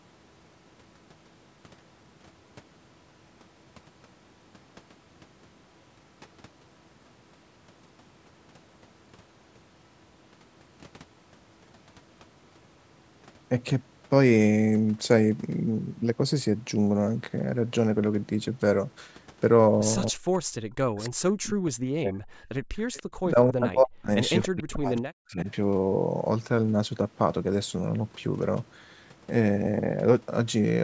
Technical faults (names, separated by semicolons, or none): speech suppressed in double talk; echo leak